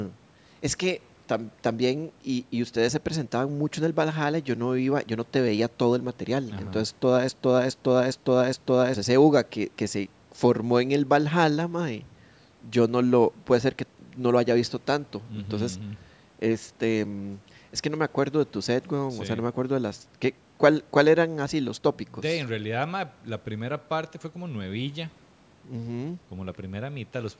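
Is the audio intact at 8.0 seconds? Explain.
No. At 8.0 seconds the speech is caught in a broken-record loop that runs from 7.29 to 8.94 s. A fragment of about 0.41 s plays back to back four times, identical each pass. It sounds like a stuck skip, with the same sliver of speech restarting again and again. The likely cause is a stall in the player, encoder or stream, which kept resending the last piece it held. Whatever speech belonged in that span is gone.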